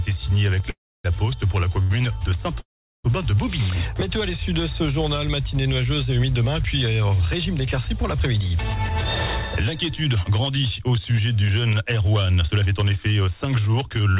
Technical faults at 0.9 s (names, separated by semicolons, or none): call audio freeze